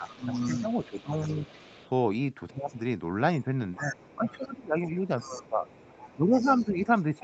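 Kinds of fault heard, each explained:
Speech suppressed in double talk: the talker's level dips by about 10 to 20 dB in patches, likely an echo canceller ducking both sides during overlapping talk.
Other side's voice leaking through: a faint second voice, about 20 to 35 dB below the talker, likely loudspeaker echo the canceller failed to remove.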